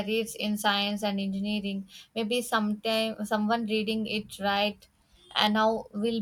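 No dropouts, clicks, distortion or level jumps anywhere in this speech recording; nothing to flag.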